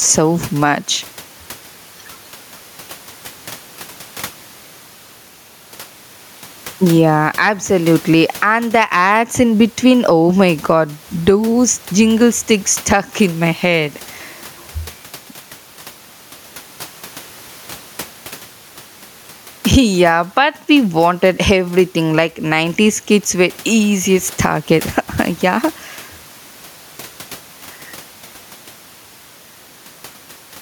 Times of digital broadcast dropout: none

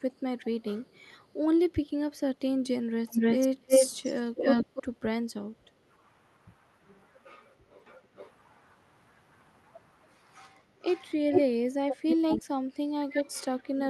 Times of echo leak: 0.92-0.99, 3.08-4.83, 7.86-8.31, 10.84-11.06, 11.31-11.42, 11.89-12.37

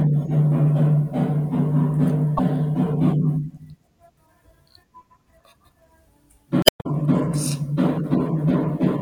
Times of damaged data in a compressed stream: 2.37-2.40, 6.62-6.86

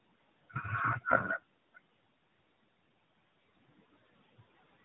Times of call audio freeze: none

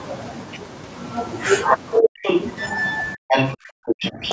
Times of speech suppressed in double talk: 2.00-2.25, 3.14-4.22

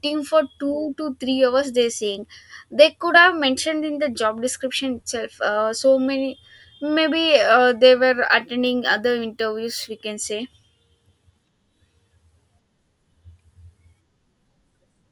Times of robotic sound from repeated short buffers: none

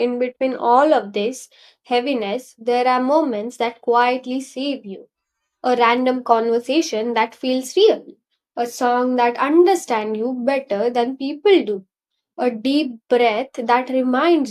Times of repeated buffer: none

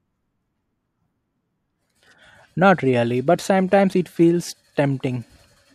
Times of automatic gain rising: none

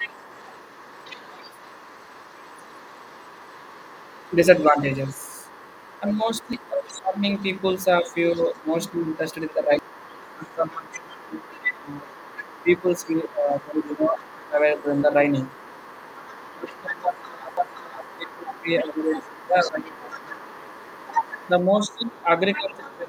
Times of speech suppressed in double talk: 4.30-4.38, 5.10-5.35, 6.00-7.23, 8.14-14.85, 16.44-20.51, 22.24-23.08

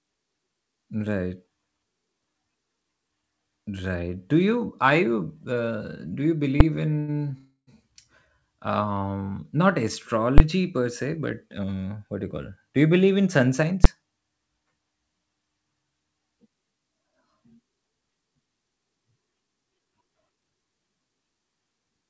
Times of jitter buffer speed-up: 19.47-20.52

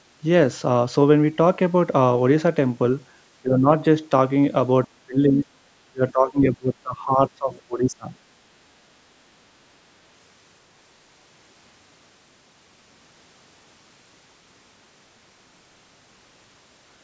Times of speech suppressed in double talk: 3.42-3.69, 4.92-5.46, 5.88-8.13

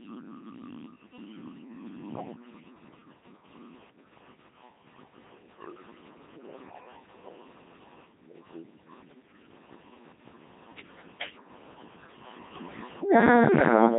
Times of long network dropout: none

